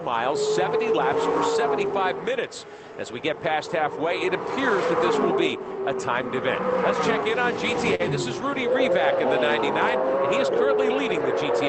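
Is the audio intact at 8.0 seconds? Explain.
No, there is a short stall from a late packet between 7.95 and 8.01 s. A packet arrived late and the jitter buffer ran empty, so the receiver held the last sound for about 45 ms until the packet came in, then resumed from where it had stopped. Nothing is lost, but everything after that point runs 45 ms later. The sound briefly hangs, stretched with a slight buzz or dip, before moving on.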